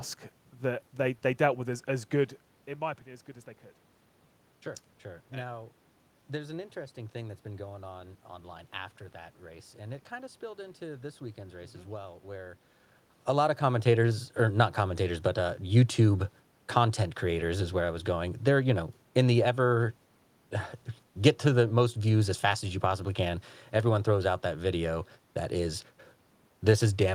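Nothing has gone wrong on the technical side here: the room noise belongs to the space where the microphone sits, and the level changes around 2 seconds and again at about 12 or 13 seconds are simply the talker moving relative to the mic.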